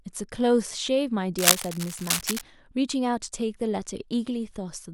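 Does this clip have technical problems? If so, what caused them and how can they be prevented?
Yes. From 1.38 s to 2.43 s there is cable scratch noise: a rough, crackling rustle laid over the speech at about the same loudness as the speech itself. The likely cause is a worn cable, connector or control being moved, so its contact resistance jumps around and injects irregular noise bursts. On a spectrogram this shows as dense, broadband vertical streaks; the waveform shows ragged spikes riding on the signal. Replace or reseat worn leads and keep cables still while recording.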